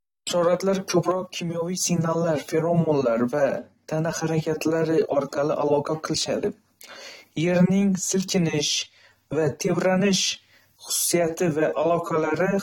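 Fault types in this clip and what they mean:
AAC compression: The speech sounds dull and smeared throughout, with plainly audible warbling and fizz on sustained sounds and sibilants. The likely cause is AAC-LC coding at a low rate, which fits about 32 kbps. Unlike a plain low-pass filter, this damage shifts and swirls over time.
sudden gain jump: From 1.12 s to 1.81 s the level drops by about 6 dB in a single step and then returns. Speech and background noise fall together, so the likely cause is a gain change applied without a ramp. A fade would glide, not step.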